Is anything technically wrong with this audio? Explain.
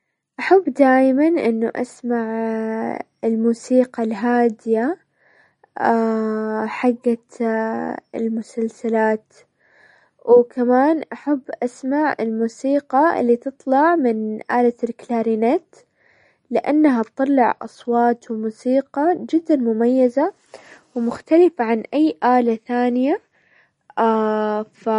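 Yes. Throughout the speech, the sound is watery and swirly, with a metallic chirp on s sounds, smeared consonant attacks, and nothing above 10.6 kHz. That points to likely MP3 compression at a low bitrate, around 40 kbps, where the encoder cuts the treble and lets weak frequency lines flicker on and off between frames.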